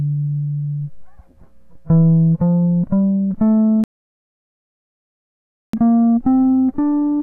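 At 3.84 s the music drops into silence until 5.73 s, a rebuffering stall: playback ran dry of downloaded audio and waited about 1.9 s, then resumed exactly where it stopped. Waveform and spectrogram show a flat, empty gap with no lost material on either side.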